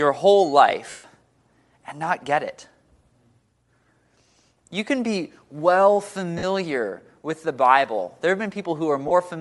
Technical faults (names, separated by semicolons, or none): Bluetooth LC3 compression; lost LE Audio frames